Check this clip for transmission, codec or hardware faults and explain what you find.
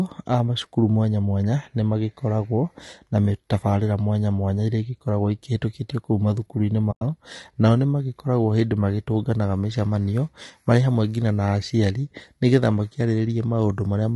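Two faults are audible in the speech. Throughout, low-delay AAC compression likely causes a rough, grainy tone with noise filling the gaps between harmonics, consistent with AAC-ELD at around 32 kbps. A spectrogram would show smeared harmonics. From 6.91 to 7.02 s, AAC frame loss with muting leaves a soft-edged hole of about 100 ms, fitting several zeroed frames. The waveform fades to silence and back, and the spectrogram shows a blank vertical band.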